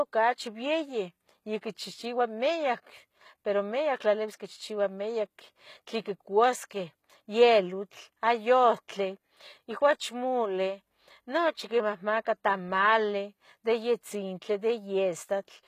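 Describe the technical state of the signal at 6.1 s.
At 6.1 s the speech carries the same HE-AAC compression damage heard across the whole clip. The treble looks rebuilt from copied lower bands, so s sounds come out gritty and lispy, and nothing reaches above about 14.9 kHz. That likely points to a very low bitrate, around 20 kbps.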